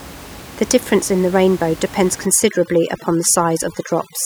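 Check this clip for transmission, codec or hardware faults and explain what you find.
There's one fault here, and it's processing rather than transmission or hardware: overdone noise removal, kicking in at 2.26 s, right after "in the rainbow depends", and running to the end of the clip at 4.25 s. The reduction is set too aggressively, so any frequency band that sits close to what it thinks is noise gets pulled right down or shut off, and the softer parts of the speech get swallowed too. You hear it as the room noise, about 18 dB below the speech before this point, dropping away and breaking up into little twinkling specks.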